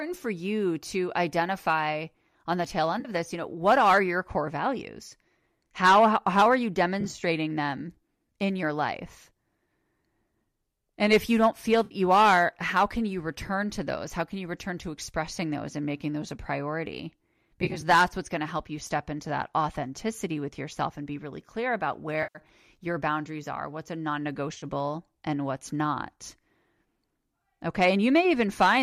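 AAC frame loss with concealment breaks the speech six times: at 3.0 s, 7.0 to 7.2 s, 11.8 s, 17.6 to 17.8 s, 22.2 to 22.4 s and 24.5 to 24.6 s. Stretches of coded audio went missing, about 50 to 120 ms each. The decoder filled them from the last good spectrum. Each gap sounds like a brief smeared, noisy patch. At 7.0, 17.6 and 24.5 s the loss comes in short scattered bursts, so the smearing flickers. The low-delay coding, likely AAC-ELD, underlies it all.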